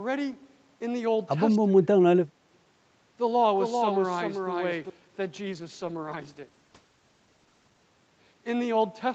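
Speech suppressed in double talk appears from 1.58 to 1.88 s, where the level sinks by roughly 30 dB, and again briefly from 2.21 to 2.25 s with a shallower dip of around 15 dB. The likely cause is an echo canceller that could not separate the talker from loudspeaker echo and turned both down.

A doubled audio track runs from 3.58 to 4.90 s: a second full-band copy of the speech trails the original by roughly 0.4 s, about 5 dB quieter, with no decay or room colour. It likely comes from a slower second capture path, and it starts and stops abruptly.

A call bitrate drop follows from 5.47 to 7.91 s. The Opus encoder was pushed to spend far fewer bits, which fits a fall from 48 kbps to about 11 kbps, held at its lowest for about 2.4 s. Coarser coding leaves the speech rough and watery until the rate recovers.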